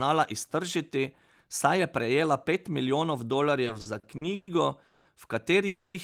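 Speech in which, from 3.65 to 4.49 s, the sound drags and stutters through eight brief stalls, the longest 120 ms, with about a third of that span filled in. These repeated stalls (stutter) come from packets arriving late so the jitter buffer kept running empty. Then two call audio freezes: at 4.87 to 5.07 s the sound is held for 180 ms, and at 5.67 to 5.96 s it is held for 270 ms, fading briefly to silence. Each is likely a stalled packet flow emptying the buffer, inserting a gap before the audio resumes.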